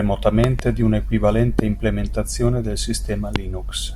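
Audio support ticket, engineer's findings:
Loud pop x3. Likely cause: voltage transient from a plug, switch, static discharge or driver glitch, added to the signal and shaped into a short pulse by downstream circuitry. Sharp pops over the speech, which carries on underneath. 0.44–0.62 s: two pops in quick succession, about 15 dB above signal, just before "di una". 1.59–1.61 s: single pop, about 20 dB, before "implementazione del". 3.36–3.38 s: single pop, about 20 dB, right after "implementazione del".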